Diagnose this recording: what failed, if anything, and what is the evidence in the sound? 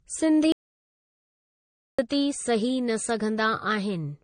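At the codec stage, the whole clip carries a smeary, warbling texture with two different flavours of compression artefact stacked on each other, and nothing survives above 9.6 kHz. That layering points to transcoding between lossy codecs, likely a low-rate AAC-LC pass followed by MP3 at around 48 kbit/s. The second encoder wastes bits faithfully re-coding the first one's junk and adds its own, while the tightest bandwidth limit in the chain sticks.

From 0.52 s to 1.99 s the speech cuts off mid-flow and drops to dead digital silence, about 1.46 s of it, with no room tone underneath before it comes straight back in. That's an audio dropout to silence, and it sits at the capture end: the input likely disappeared, through a lost device, a failed link or a stray mute, while the recorder kept writing silence. Whatever was said in that stretch is simply gone.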